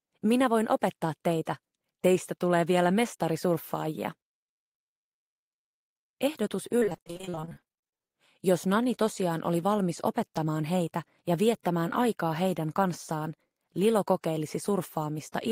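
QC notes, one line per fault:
6.79–8.16 s, repeated packet loss (robotic sound): about thirty holes, none over 41 ms, arrive back to back. Each is patched by extending the last fragment, so about half the span is filled-in sound and the rest missing, giving a choppy texture rather than one clean dropout.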